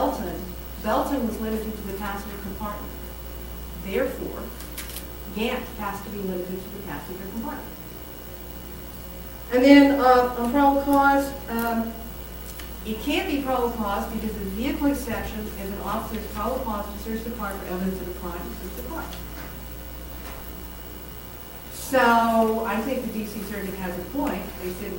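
Nothing stood out as a technical fault on listening.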